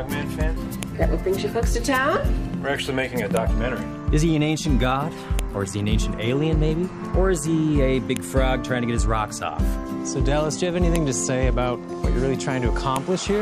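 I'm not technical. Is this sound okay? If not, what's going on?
No. The audio was assembled from separate pieces, and each piece still had its file header attached, the short block of setup information that normally sits at the front of a file. That data got played as if it were sound. The fault is called file header played as audio, and you hear it as a sharp, loud click or snap at 0.83, 3.37, 5.39, 8.17, 10.96 and 12.96 seconds, each marking where a new piece begins.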